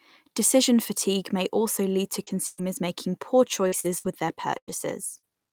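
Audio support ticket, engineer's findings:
Short concealed packet loss, 2.23–2.30 s, after "may also lead to": brief smear where about 40 ms of audio is missing and 33 ms is filled. Receiver jitter buffer/PLC extrapolated the last sound, then cross-faded back into real audio.

Lost packet rebuilt from error correction, 2.27–2.29 s and 2.58–2.60 s: a 20 ms rough, noisier patch in each, with no gap. The decoder played the low-bitrate in-band FEC copy carried by the following packet (Opus). This fits a 20 ms frame.

Burst of packet loss, 2.47–2.61 s, between "may also lead to" and "making poor": about 100 ms of audio missing, 108 ms concealed. The last sound is held and fades as the gap runs. There is no silence, and playback resumes further on. Likely network burst loss or late arrivals.

Repeated packet loss (robotic sound), 3.68–5.31 s: five gaps, the longest 98 ms. About 300 ms of audio is missing and 290 ms is concealed, around 18% of the span. 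The sound is choppy, with pieces missing. Repeated PLC extrapolation and a few FEC-rebuilt frames patch the gaps.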